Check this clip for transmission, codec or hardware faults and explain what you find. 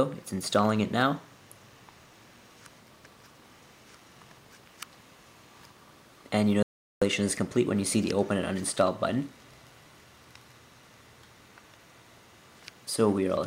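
One fault is present. From 6.63 to 7.02 s there is an audio dropout to silence lasting 0.39 s. The sound cuts off abruptly into silence, with no room tone. The input was likely lost while recording continued, writing silence. Whatever occurred in that gap is missing.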